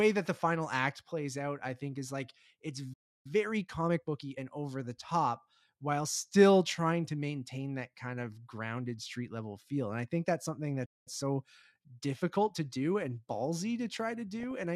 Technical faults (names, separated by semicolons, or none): playback stall; time-compressed catch-up; DAB burbling